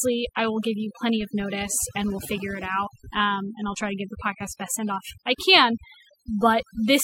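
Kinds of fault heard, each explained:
Overdone noise removal: a noise reduction stage was set far too aggressively, so every frequency band that came close to its noise estimate was pulled right down or switched off, taking the softer parts of the speech along with the noise. Across the whole clip the background drops to an unnatural near-silence dotted with twinkling, chirpy specks, while the voice has its quieter detail hollowed out.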